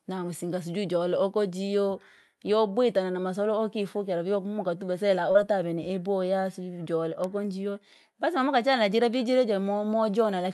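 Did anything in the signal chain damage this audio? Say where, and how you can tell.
Yes, there's a short concealed packet loss on the network side of the call, from 5.31 to 5.37 s. About 40 ms of audio didn't reach the decoder in time, and the receiver patched roughly 32 ms of it by carrying the preceding sound forward, then crossfading back into the real audio. You hear it as a brief smeared wobble right there. The top end rolls off around 12 kHz, which fits an Opus call path.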